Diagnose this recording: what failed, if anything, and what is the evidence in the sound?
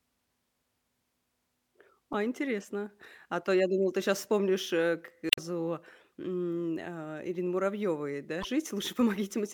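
Damaged data in a compressed stream at 2.11–2.15 s, 5.29–5.39 s and 8.40–8.45 s, heard as short chirps or blips cutting into the speech. At the codec stage, corrupted bytes make the decoder misread those frames, lose sync and hunt for the next valid frame header.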